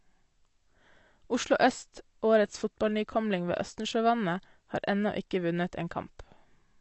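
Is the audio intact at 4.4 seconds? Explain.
No, AAC compression damage runs through the whole clip, including 4.4 s. Nothing remains above 8.2 kHz, and sustained sounds and sibilants turn dull, smeared and warbly, likely from a low-bitrate AAC-LC encoder, around 32 kbps, coarsely quantising frequency lines.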